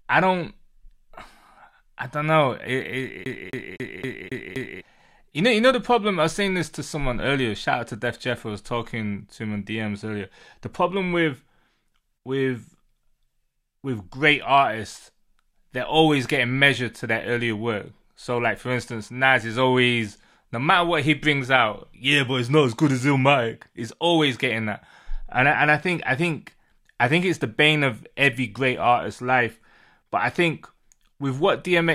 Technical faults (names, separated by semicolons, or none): CD stuck on one turn